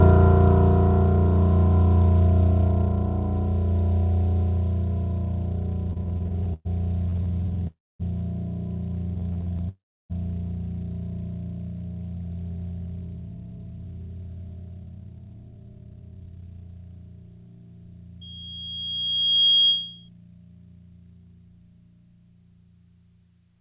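From 5.9 to 6.67 s, 7.09 to 7.63 s and 9.15 to 9.61 s the music stutters in repeated stalls: late packets kept emptying the jitter buffer, so brief stretches of up to 114 ms are padded with continued sound, dragging rather than skipping. At 7.67 to 8.02 s and 9.69 to 10.12 s each stall becomes a single call audio freeze, a 0.32 s and a 0.41 s hold that fades mostly to silence before the music resumes where it stopped. A held-up packet flow likely caused both. From 18.21 to 20.09 s a loudspeaker feedback squeal, a lone 3.3 kHz tone, swells over about a second and a half to about 5 dB above the music, within the call path's band ending at 4 kHz.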